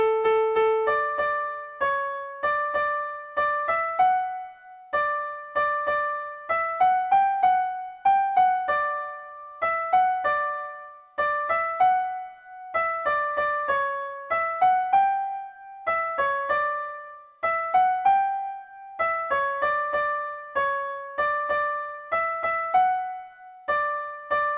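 No technical faults are audible.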